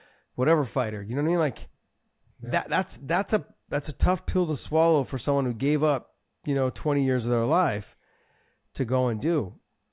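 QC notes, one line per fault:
No faults heard in this clip.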